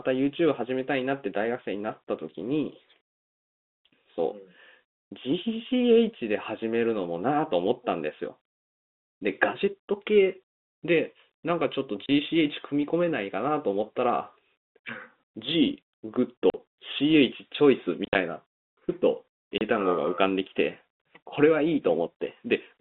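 A speech clip over a telephone-band line, and it has packet loss filled with silence. There are short dead holes of about 30 ms at 12.06 s, 40 ms at 16.5 s, a scattered cluster from 18.05 to 18.15 s with the longest gap near 50 ms, and another 30 ms hole at 19.58 s. The hole lengths fit 10 ms packets being dropped and replaced with nothing, so each gap starts and ends with a hard edge.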